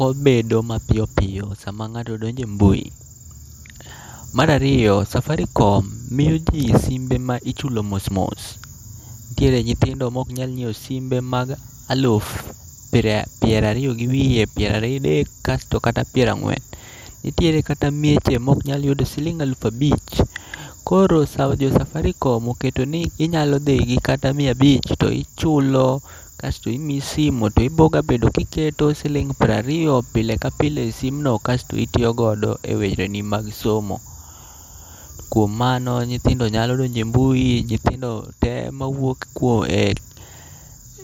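From start to finish the speech has a dull quality with a gurgling, granular grit riding on it, and the top end keeps flickering in and out, which is what MP2 compression sounds like when it's starved. The likely cause is MPEG Layer II running at a low bitrate, something in the region of 80 kbps, so the encoder drops whole upper sub-bands and coarsely quantises the ones it keeps.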